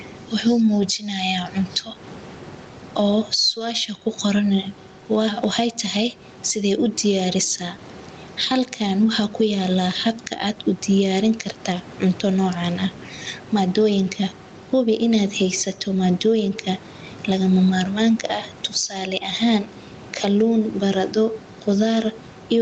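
Gain pumping runs through the whole speech clip. The level breathes. The swing is about 15 dB. The likely cause is input gain set far too high, with a fast limiter or compressor pulling it down on every loud syllable. Loud and quiet passages end up close in level, so the speech sounds squashed. The room noise sits about 29 dB below the speech.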